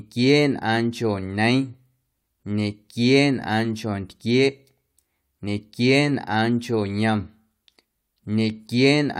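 No technical faults are audible.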